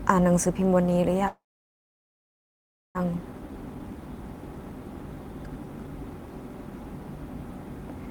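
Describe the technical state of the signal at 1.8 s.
At 1.8 s the signal is inside a call audio freeze running from 1.27 to 2.97 s. The last sound is carried on only briefly before dropping to silence, which lasts about 1.56 s of the 1.68 s hold. The likely cause is packets held up in transit, leaving the jitter buffer empty. When the audio resumes it continues from where it stopped, so nothing is lost, but everything after it arrives about 1.68 s later.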